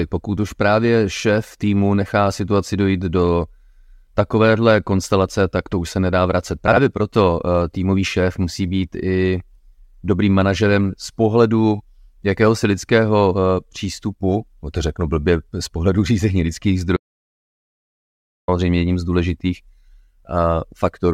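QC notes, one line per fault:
6.68–6.77 s, frames out of order: just after "už se nedá vracet", two adjacent runs of two frames, 46.4 ms each, play swapped, so the stretch is heard with its halves exchanged, giving a brief garbled flutter; no time is lost.
16.97–18.48 s, audio dropout to silence: after "řízení lidských" the sound cuts out mid-flow to silence with no room tone for 1.51 s, resuming at "jedním z důležitých"; likely input loss while silence was written, and the content in that gap is gone.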